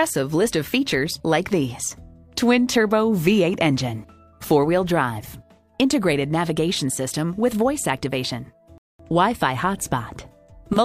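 At 8.78 s the player's buffer ran dry, causing a rebuffering stall: a sudden gap of silence lasting about 0.21 s, after which the sound resumes exactly where it stopped.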